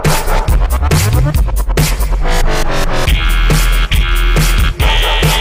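Nothing is technically wrong with this audio clip.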